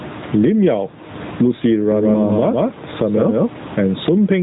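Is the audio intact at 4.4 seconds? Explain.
No. At 4.4 s the level ducks by around 15 dB under each loud sound, gain pumping likely caused by a fast limiter clamping down on excessive gain. The speech is also thin, buzzy and synthetic, with nothing above 3.8 kHz. This is AMR narrowband mobile codec damage, and its character fits a bitrate of about 10.2 kbps. That damage runs through the whole clip.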